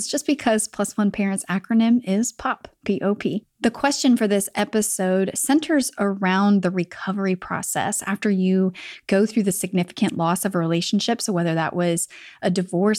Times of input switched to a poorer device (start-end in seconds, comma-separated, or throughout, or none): none